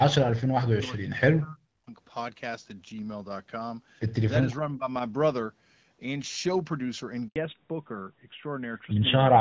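Right from the start, 0.00 to 1.94 s, the speech keeps ducking and chopping, sinking by roughly 40 dB at its worst across about a second and a half. That's most likely speech suppressed in double talk, with the echo canceller squashing the near talker while the far side spoke. A milder dip of roughly 15 dB hits again from 4.6 to 4.9 s.

At 7.28 s there's a handover gap. The sound fades out quickly and stays silent for 80 ms, until 7.36 s, as the call hops networks and no frames arrive in between.

Once the link returns at 7.36 s and through to the end, it's a fallback to narrowband. The crisp HD Voice top end disappears, with nothing left above 4 kHz, so the sound turns duller and rougher. That fits a drop from AMR-WB at 12.65 kbit/s to AMR-NB at 12.2 kbit/s.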